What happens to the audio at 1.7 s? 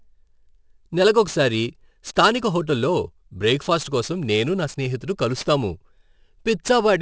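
At 1.7 s there's aliasing, present throughout the clip: the speech was downsampled without filtering, so content above 8 kHz folds back, making sibilants gritty at roughly 20 dB below the signal.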